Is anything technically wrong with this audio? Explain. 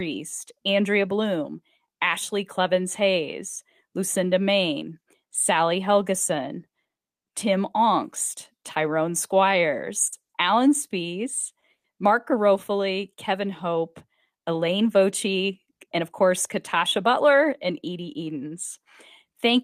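Yes. Short stalls from late packets occur at 10.07, 10.20 and 11.60 s. Packets arrived late, so the receiver held the last sound for 50, 90 and 20 ms, producing brief stretched moments with a slight buzz or dip.

A call audio freeze runs from 11.74 to 11.86 s, likely from packets held up in transit. The sound is continued for 100 ms, about 90 ms of it silence, before resuming.

A jitter buffer speed-up runs from 14.84 to 16.23 s. Repeated removal of small pitch-period slices cuts about a tenth of a second, so the speech runs about 7% faster at unchanged pitch and sounds hurried.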